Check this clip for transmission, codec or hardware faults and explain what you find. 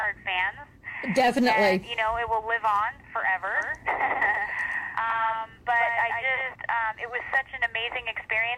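One fault is present. A doubled audio track runs from 3.55 s to 6.55 s. A second full-band copy of the sound trails the original by roughly 150 ms at about 5 dB lower, most likely because a slower capture path recorded the same signal again. It lands as a crisp, dry slap-back with no decay or room colour, switching on and off abruptly at the edges of that span.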